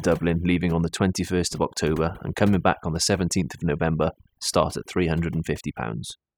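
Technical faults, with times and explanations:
Throughout, overdone noise removal: a noise reducer set far too strong keeps cutting individual frequency bands whenever they sit near its noise estimate, so the background drops and breaks up into twinkling specks, and quiet parts of the speech vanish too.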